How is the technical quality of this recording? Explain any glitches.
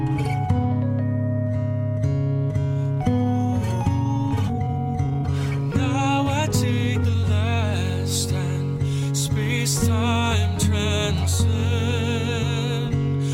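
The recording has two kinds of timing glitch, both clustered around the 4 to 7 second mark.

At 4.47 to 4.49 s there is a skip ahead. Roughly a second of audio never plays. It was dropped in transit or discarded by an overflowing jitter buffer while later audio was already queued. Nothing fills the hole. The sound on either side is spliced almost directly together. The result is an abrupt jump forward, with the listening delay cut by about a second.

From 4.53 to 6.26 s, and again from 6.84 to 7.24 s, there is jitter buffer speed-up. The buffer was holding more audio than its target, so the receiver trimmed tiny pieces, one or a few pitch periods long, over and over. The first stretch plays at 125% speed and sheds about half a second. The second runs at 108% and loses a few tens of milliseconds. Pitch stays the same, but the sound feels hurried.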